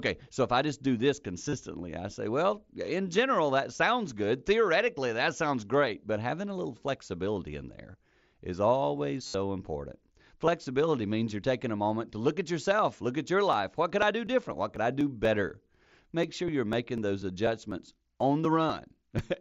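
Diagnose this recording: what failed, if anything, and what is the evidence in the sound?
Buzzy, held tones at 1.49–1.53, 7.92 and 9.26–9.34 s, with a nearly hidden single loss at 10.47 s, point to concealed Bluetooth headset packet loss: the receiver looped recent waveform over lost radio packets.

Evenly spaced ticks every 0.25 s from 13.28 to 19.19 s indicate periodic USB or driver dropouts, with a blocked driver skipping a few milliseconds each time.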